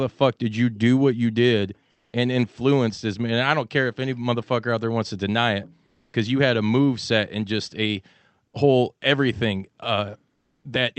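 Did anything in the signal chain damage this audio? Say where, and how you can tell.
Yes, at the call-processing stage. In the pauses at 1.91–2.13 s, 5.85–6.13 s and 10.35–10.63 s, the real background becomes a steady, featureless hiss: comfort noise in place of the background, likely from Opus DTX. The last two are about 4 to 5 dB quieter. A noise gate would leave silence, not shaped noise.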